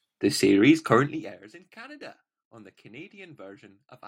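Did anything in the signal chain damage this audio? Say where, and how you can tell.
Yes. From 0.94 to 1.4 s, ticking rides on the speech as it fades. This is zipper noise: the gain stage applies unsmoothed 1 dB steps, about fifty a second.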